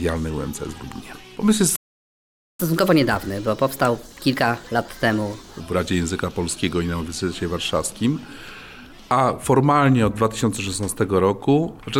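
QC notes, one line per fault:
1.76–2.60 s, playback stall: the sound cuts off mid-flow and the output stays silent for 0.83 s before resuming. The player likely ran short of buffered data or had its thread blocked, so nothing reached the output until it recovered.
2.60–5.60 s, catch-up at higher speed: for three seconds after the stall the audio plays at 1.25 times normal speed, with pitch raised by roughly four semitones, then drops back to normal. The player is resampling its backlog faster to recover the lost time.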